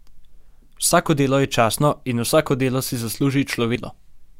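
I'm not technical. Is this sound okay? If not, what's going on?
No. At about 3.75 to 3.77 s the speech suddenly jumps forward with a tiny blip, as if a piece of the recording were snipped out and the two ends pushed together. This is called a stream segment skipped. Streamed audio arrives in short chunks, one after another. The likely cause is that one chunk failed to arrive in time, so the player dropped it and carried straight on with the next one.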